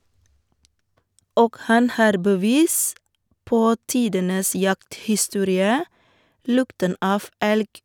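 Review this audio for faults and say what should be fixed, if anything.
Nothing stood out on listening to this speech recording, so there is nothing to fix.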